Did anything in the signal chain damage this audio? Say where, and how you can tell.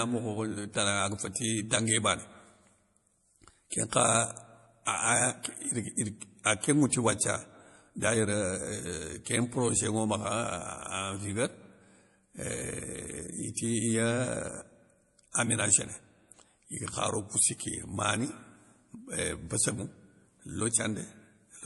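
Yes. At the codec stage, the speech has nothing above 11.4 kHz for its full length, with plainly audible watery, swirling texture on s sounds. A hard treble cut with flickering weak detail, not an analogue roll-off, points to likely MP3 encoding, fitting a low bitrate around 48 kbps.

Also from the codec, pre-echo appears at 5.43 s and 6.44 s: a short hiss about 18 ms long arrives just ahead of a sharp attack. Unlike a click or dropout, it sits only before onsets, because quantisation noise sized for the loud attack spread across its block's quiet start.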